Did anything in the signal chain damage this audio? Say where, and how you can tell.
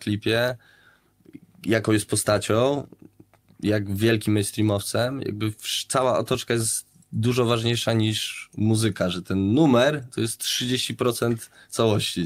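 No, nothing stood out on listening that would point to damage anywhere in the signal chain.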